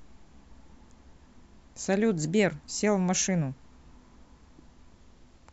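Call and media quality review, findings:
No transport, processing or playback faults were found in the speech signal, and level and continuity hold steady throughout.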